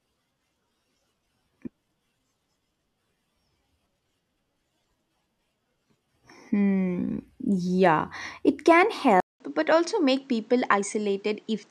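At 9.20 s, right after "yeah it can", the speech drops out for about 0.2 s and returns duller, a few decibels quieter, with nothing above 8.7 kHz and a faint new background noise. This is most likely the input switched to a poorer device, and it lasts to the end. A simple filter or codec bandwidth change would only dull the top end. Here the gap, the level drop and the changed noise floor all arrive together, which points to a different microphone taking over.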